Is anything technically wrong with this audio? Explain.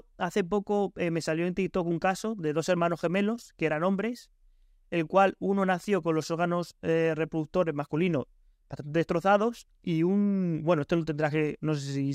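No, nothing in this speech recording shows a technical fault.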